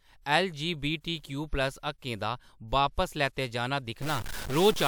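A stuck bit runs from 4.02 s to the end of the clip, heard as added distortion laid over the speech. The likely cause is one data bit held fixed, so roughly half the sample values land off by that bit's weight.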